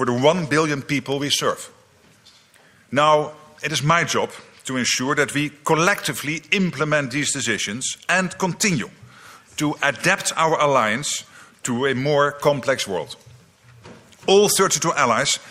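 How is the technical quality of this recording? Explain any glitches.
No glitches or technical faults can be heard anywhere in the recording, so the signal holds steady throughout with nothing to explain.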